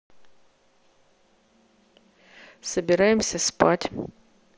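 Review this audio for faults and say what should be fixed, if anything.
Concealed Bluetooth headset packet loss at 1.47 s and from 2.85 to 2.89 s: dropped packets were patched by repeating recent waveform, visible as copied cycles and flat spectrogram bands. Keep the headset close to the phone and clear of radio interference so fewer packets drop.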